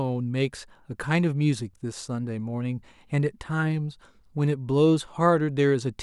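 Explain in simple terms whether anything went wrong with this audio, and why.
Nothing went wrong here: the speech recording has no audible technical faults anywhere in the clip.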